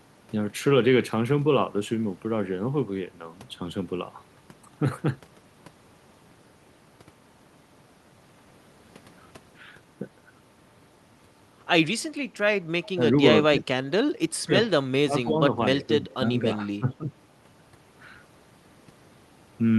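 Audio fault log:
12.83–12.89 s and 16.11–16.15 s, echo leak: brief faint copies of the speech return 245 ms late, about 25 to 30 dB down, likely loudspeaker pickup the echo canceller missed.
12.95–13.02 s, 13.5–13.67 s, 14.46–14.68 s, 15.05–15.53 s and 16.01–17.04 s, speech suppressed in double talk: the speech dips in pieces by about 10 to 15 dB, likely because the echo canceller turned down both overlapping talkers.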